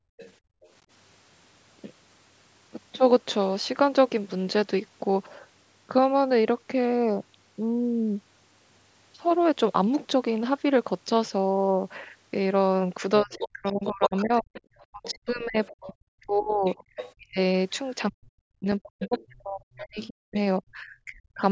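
From 0.0 to 0.61 s the room sound is gated by the echo canceller. While the loudspeaker plays, the microphone is pulled down hard, by as much as about 32 dB. The background dips out for about 0.4 s in total, then returns.

From 0.19 to 0.69 s a faint second voice sits under the speech, about 25 dB lower. This is likely the other side's voice leaking through. The canceller did not strip all the loudspeaker sound from the microphone.

From 13.23 to 17.38 s the speech is suppressed in double talk. Both sides are likely talking at once. The canceller cannot tell its talker from the echo, so it turns everything down. The speech dips by up to roughly 40 dB, for about 3 s in total. Leaked far-end voice comes through from 13.3 to 15.92 s, about 10 dB below the speech, and again from 16.65 to 17.13 s, about 15 dB below. Each stretch is likely residual echo.

From 18.09 to 21.43 s the same double-talk suppression returns. 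The cause is likely overlapping talk again. The speech drops by up to roughly 40 dB, for about 3 s in total. Short scraps of the other side leak through at 19.0 to 19.26 s and 19.99 to 20.34 s, each about 20 dB under the speech and likely left over by the canceller.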